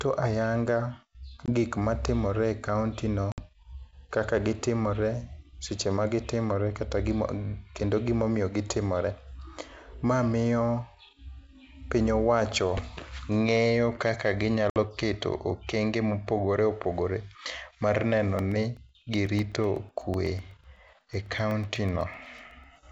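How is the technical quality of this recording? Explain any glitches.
The call has two kinds of glitch: a few short gaps from packet loss on an ADPCM call, and a run of ticks from periodic USB or driver dropouts near the end. The G.722 wideband coding sounds clean and full-rate.

Packet loss on the ADPCM call causes hard silent holes at 1.46 to 1.53 s (just before "gik matimore e kaontino"), 3.32 to 3.41 s (just after it) and 14.70 to 14.77 s. The first loses about 20 ms and the other two about 60 ms each. The decoder's predictor loses sync with the sender's, so the speech comes back slightly distorted before it settles.

The periodic USB or driver dropouts start after "mar neno" and run from 18.39 to 22.76 s. Every 0.125 s, around a millisecond of audio goes silent, which gives roughly forty evenly spaced ticks.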